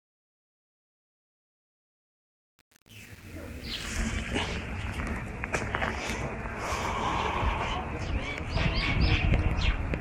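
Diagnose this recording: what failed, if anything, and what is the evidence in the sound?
The fade from 0.0 to 3.9 s sounds gritty where it is quietest. This is truncation distortion on a fade at the gain or sample-format conversion stage: only 7 bits survive, undithered, so quiet waveforms collapse into coarse square steps.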